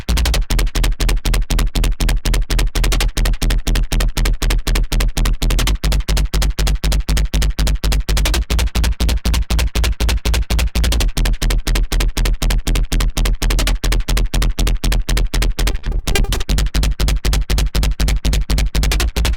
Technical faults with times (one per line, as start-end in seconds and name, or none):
15.71-16.57 repeated packet loss (robotic sound)